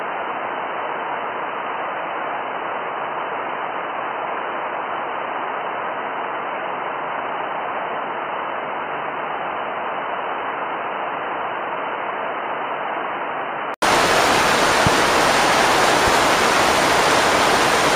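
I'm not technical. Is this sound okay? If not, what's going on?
No. For the first 13.82 seconds the sound is dull and boxy, with nothing above 3 kHz. It then clears up after a short gap of about 80 ms. This is an input switched to a poorer device: the recording likely started on a lesser microphone or headset before changing back.

There are also two loud pops, a sharp one at 14.87 seconds and a softer one at 16.07 seconds, sitting on top of the sound, which carries on underneath. These are likely brief electrical jolts from a plug, switch or static.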